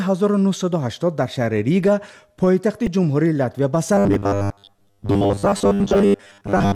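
At 2.86 s a short, sharp chirp cuts through the sound. This is a corrupt frame decoded. Bits in the compressed data were damaged, but the decoder played the frame anyway. Misread values sent energy to the wrong frequencies. The error is fairly loud, peaking near -10 dBFS. It lasts only about 16 milliseconds.

From 3.95 s to the end, the sound turns into a rigid, metallic buzz at 100 Hz. This is robotic sound from repeated short buffers. New audio likely arrived too slowly, so a tiny slice was replayed again and again. The 100 Hz pitch fits a 10 ms buffer. Most of the real audio in this stretch, well over half, is lost to the repeats.

Two more corrupt frames land inside the buzz. One is a blip at 4.14 s, and a longer burst runs from 5.92 to 5.97 s. Both peak loud, near -5 dBFS.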